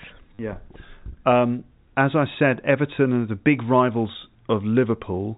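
Right near the start, from 0.35 to 0.39 s, there's packet loss with the last packet repeated. About 40 ms of audio went missing, and the receiver filled the gap by replaying the last good packet over and over until fresh data arrived. The length of the gap fits four 10 ms packets. You hear it as a short robotic stutter that buzzes or flutters at the packet rate. The telephone-band G.711 coding underneath cuts everything above 4 kHz.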